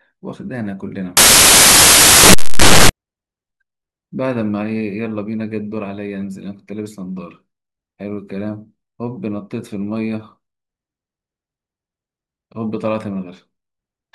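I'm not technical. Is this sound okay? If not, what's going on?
No. From about 1.17 to 2.89 seconds the speech is buried under a loud burst of hiss, like static. These are samples built from the wrong bytes: the player assembles each sound value from mismatched pieces, turning its tiniest details into loud noise.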